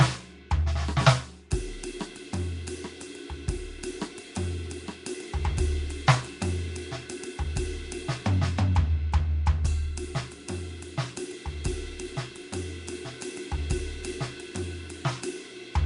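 A music clip with plainly audible codec damage from start to finish. The sound is rough and hissy, with a smeared, underwater quality. Nothing reaches above about 10.6 kHz. This is likely Nellymoser compression, where weak bands are replaced with noise, and the damage fits a rate near 44 kbps.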